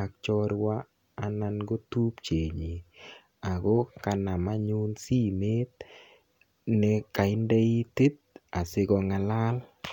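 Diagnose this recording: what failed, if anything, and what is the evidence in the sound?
Nothing in the signal chain has failed: the speech signal is continuous, with no dropouts, clipping, hum or timing disturbances anywhere in the recording.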